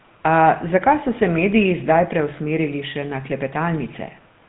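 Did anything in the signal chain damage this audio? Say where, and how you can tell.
Yes. The GSM full-rate codec damaged the audio throughout the speech. The band stops sharply at 4 kHz, and the voice has a buzzy, gravelly roughness that fits a rate near 13 kbps. The codec models the vocal tract and excites it with a coarse, regularly spaced pulse train that keeps only every third excitation sample. A plain telephone-band filter would sound dull but smooth. The grainy buzz on top of that missing top end is what marks this codec.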